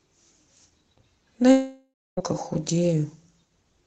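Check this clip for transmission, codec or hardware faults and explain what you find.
One fault stands out in this speech clip. The sound passes through an Opus call codec, its high end cut off above about 8 kHz.

A long network dropout runs from 1.51 to 2.20 s. Audio likely stopped arriving, so the receiver stretched the last sound into a fading buzz, then near-silence for about 0.26 s. Speech resumes at 2.20 s, with roughly 0.66 s never heard.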